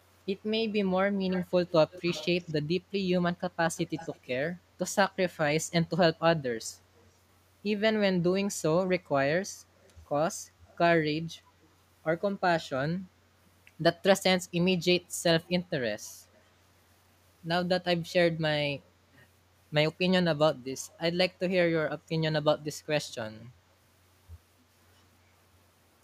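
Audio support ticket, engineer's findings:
Echo leak: delayed copy of the speech trailing the original by 251 ms, at 1.32–2.54, 3.76–4.27, 6.96–7.06, 9.81–11.68, 19.13–19.18, 20.89–20.93 and 23.09–23.45 s. Loudest early, around 15–20 dB below the speech, later faint, near 35–40 dB down. Likely far-end loudspeaker pickup that the echo canceller did not fully remove, with the residue sent back into the call.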